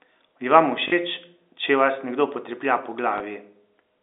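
Packet loss with the last packet repeated hits this telephone-band speech recording at 0.88–0.92 s and again at 3.18–3.20 s. Audio went missing for 40 ms and then 20 ms, which fits 20 ms packets. The receiver replayed the last packet it had instead of leaving silence, so the first gap becomes a brief robotic stutter and the second a small blip. The repeated segment seldom aligns with the pitch, and the longer gap buzzes at about 50 Hz.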